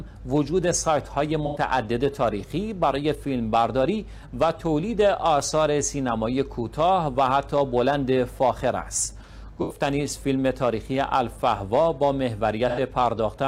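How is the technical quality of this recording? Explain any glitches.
Three short dropouts from AAC frame loss with concealment interrupt the recording, at 1.46–1.58 s, 9.61–9.80 s and 12.68–12.80 s. In each case about 85 ms of coded audio, consistent with two consecutive AAC frames, never reached the decoder. The decoder patched the gap by reusing the last good spectrum with randomised phase, so each spot sounds briefly smeared and noisy. On a spectrogram these show as blurred, featureless vertical bands; the waveform keeps its envelope but loses fine detail.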